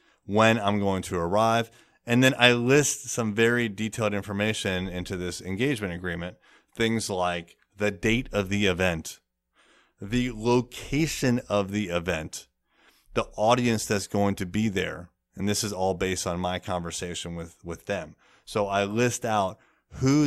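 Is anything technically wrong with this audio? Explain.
No, nothing in this speech recording stood out as technically wrong on listening.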